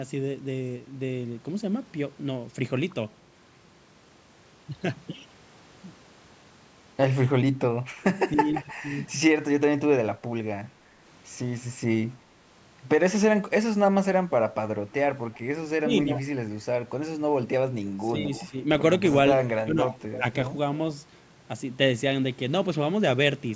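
At 8.02 to 9.13 s, the far end's echo canceller likely left some of its loudspeaker pickup in place, so an echo leak sends back a faint copy of the speech about 305 ms late and about 25 dB down. Inside that stretch, from 8.29 to 8.66 s, speech is suppressed in double talk. The canceller, likely unable to separate the talker from the echo, turns the speech down by roughly 10 dB in short dips.

The same pairing recurs three more times. An echo leak runs from 15.36 to 16.19 s, with suppression at 15.79 to 15.9 s. Suppression runs from 18.12 to 18.54 s around an echo leak at 18.31 to 18.47 s. Suppression from 19.57 to 20.23 s is the deepest, at roughly 20 dB, and carries a brief echo leak at 20.12 to 20.18 s. These later echoes trail by about 310 ms and grow louder, at about 20 dB and then about 15 dB below the speech.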